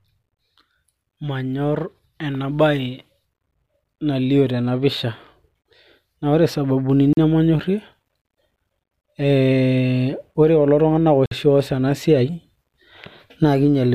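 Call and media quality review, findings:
Bluetooth stall, speech cut to silence at 7.13 to 7.17 s (41 ms) and 11.26 to 11.31 s (55 ms), then resumes cleanly. Likely a wireless link stall that drained the headphone buffer. Clean resumption, no smeared concealment fill, separates it from codec packet-loss artefacts.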